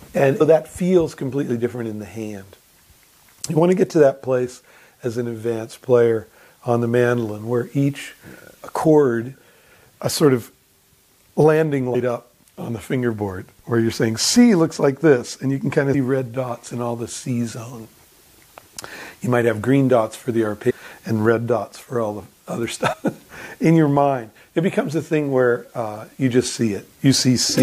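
Brief glitches at 0.40 s, 11.94 s, 15.93 s, 20.69 to 20.72 s and 22.92 to 22.94 s point to damaged data in a compressed stream. The decoder misreads corrupt frames and resyncs.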